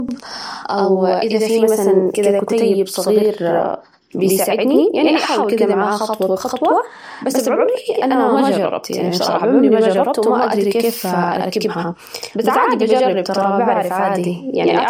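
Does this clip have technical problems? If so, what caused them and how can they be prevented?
Yes. Channel delay doubling runs through the whole speech clip: one channel arrives about 85 ms late, consistent with a 4096-sample buffer, and the mono sum plays both copies equally, giving a slap echo. Prevent it by aligning channel buffers before summing.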